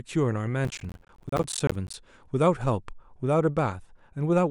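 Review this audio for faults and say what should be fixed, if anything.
Processor overload crackle runs from 0.65 s to 1.94 s. A burst of gritty crackle tears through the speech there, then stops cleanly. The processor could not finish its small audio buffers on time. Each missed buffer dropped out as a short hard-edged gap of silence, roughly 10 ms long. Around fifty such gaps pile up in that stretch. Together they sound like tearing. To prevent it, reduce the processing load or use a larger buffer.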